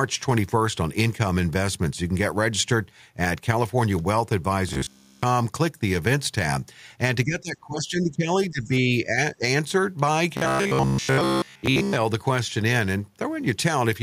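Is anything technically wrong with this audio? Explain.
Yes. Several faults affect this speech clip.

From 4.69 to 5.23 s, and again from 10.37 to 11.96 s, the voice turns into robotic sound from repeated short buffers. A rigid, metallic buzz sits at 66.7 Hz. That rate fits a loop of about 15 ms. The likely cause is audio arriving too seldom, with the software replaying the last short chunk instead of real audio. In the first stretch nearly everything is repeated. In the second, most of it is, and the words stay only loosely traceable.

Between 7.25 and 9.16 s, speech is suppressed in double talk. The voice dips repeatedly, by about 15 dB at its deepest, across roughly one and a half seconds in total. A brief dip follows at 9.34 to 9.42 s. This likely comes from an echo canceller that could not tell the talker apart from loudspeaker echo while both sides spoke, so it turned everything down. 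The voice thins and drops away in pieces.

Inside that stretch, from 8.63 to 8.68 s, the other side's voice leaks through. It is a faint scrap, about 30 dB below the main speech. The likely cause is far-end audio from the loudspeaker reaching the microphone, with the echo canceller failing to remove all of it.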